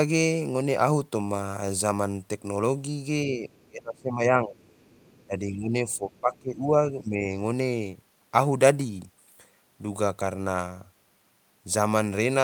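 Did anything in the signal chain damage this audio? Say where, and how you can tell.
Yes. Faint scraps of a second voice sit far beneath the talker, roughly 35 dB down, at 3.55–3.68 s, 4.72–5.25 s, 5.91–5.96 s and 6.17–6.40 s. This other side's voice leaking through points to the call-processing stage. The far end is most likely being played on the talker's loudspeaker and picked up by the microphone, and the echo canceller is not subtracting all of it, so residual echo slips into the outgoing signal.

Around those same moments the talker's own speech sinks. It drops by something like 25 dB at 3.69–4.68 s, around 15 dB across 5.26–6.74 s, and about 10 dB at 6.92–7.28 s. This is speech suppressed in double talk, again in call processing. The likely cause is the echo canceller failing to tell near-end speech from loudspeaker echo while both are active, and attenuating everything.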